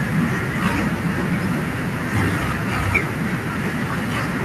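No dropouts, clicks, distortion or other technical faults can be heard anywhere in this short speech recording.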